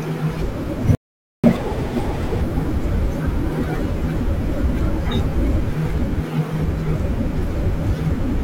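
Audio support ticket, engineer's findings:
Playback stall, 0.95–1.44 s: speech stops dead for 0.49 s. Waveform shows a flat line and the spectrogram an empty band. Likely a buffer underrun or blocked output thread.

Catch-up at higher speed, 1.44–2.42 s: the player resamples its backlog at 1.5x, raising pitch roughly seven semitones. Spectrogram harmonics shift upward and the waveform shows compressed syllables before returning to normal.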